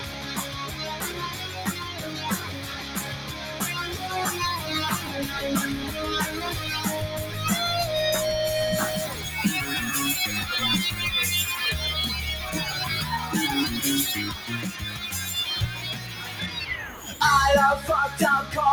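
A faint, steady ticking runs under the whole clip at about ten clicks a second, well below the main sound at roughly 30 dB down. This is Wi-Fi interference: a nearby radio's beacon, spaced 102.4 ms apart, is being rectified by the audio circuitry. The metronomic regularity is what separates it from mains hum, which is a tone rather than a tick, and from random crackle from a bad connector. Any rougher rasps between ticks come from data bursts rather than the beacon.

There is also a noise suppressor applied to music or sounds, a processor designed for speech that treats sustained, steady material as noise. Across the clip the level swings by around 10 dB. Onsets come through intact while held portions and decays sag, giving a pumping, fluttering thinness. A compressor behaves differently, because it reacts to loudness rather than to steadiness, so it clamps attacks instead of sparing them.

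The specific places where sound is cut by the noise suppressor are 0.00 to 0.83 s, 1.12 to 3.61 s, 14.32 to 14.49 s, 14.69 to 15.03 s, 15.71 to 16.56 s and 16.87 to 17.06 s. In these stretches the material sinks by about 5 to 6 dB, or its tail is chopped short. The longest, near 2 s in total, falls early in the clip. Because these dips track sustain rather than overall level, they are distinct from simple gain riding or dropouts.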